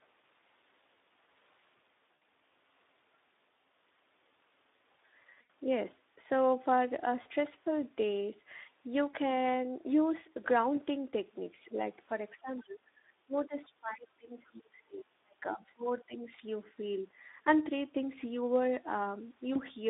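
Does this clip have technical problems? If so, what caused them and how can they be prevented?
Yes. Speex codec: the speech went through Speex at a low setting, which fits roughly 11 kbps, band-limited to 250 Hz to 3.7 kHz, so it sounds plainly hoarse, noisy and narrow throughout. Encoding at a higher Speex quality setting, or with a modern wideband codec such as Opus, would prevent this.

VoIP packet loss concealed by the speech codec: packets were lost at 2.16–2.21, 5.41–5.50, 7.21–7.28, 9.11–9.16 and 19.53–19.63 s, and the decoder extended the preceding sound into a fading buzzy or coloured-noise fill. A larger jitter buffer, forward error correction or a more reliable network path would prevent these gaps.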